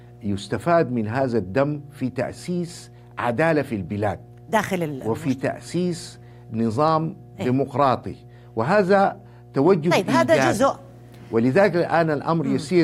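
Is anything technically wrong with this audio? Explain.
Yes. Mains hum runs through the entire speech clip: a steady 60 Hz tone with low harmonics sits roughly 25 dB below the speech. A ground loop or nearby transformer is coupling the power line into the signal, producing a constant low buzz under the speech and in its pauses.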